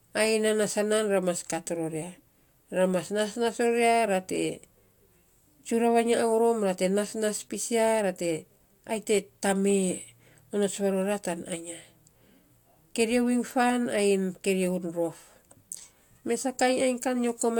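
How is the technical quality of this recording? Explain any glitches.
No technical glitches can be heard anywhere in this speech recording. Nothing in it calls for an explanation.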